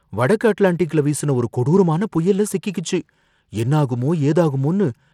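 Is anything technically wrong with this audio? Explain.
Yes. Throughout the speech there is plainly audible codec damage, likely Bluetooth SBC compression. Nothing remains above 16.4 kHz, the upper treble flickers, and a gritty grain with aliasing rides on the sound, which fits a tight bit pool near 96 kbps starving the top sub-bands.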